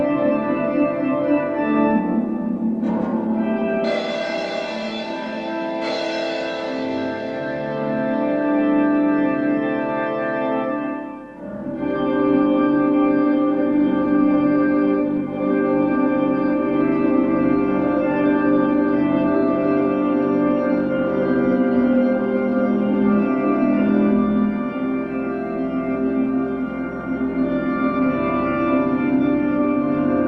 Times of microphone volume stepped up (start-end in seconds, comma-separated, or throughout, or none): none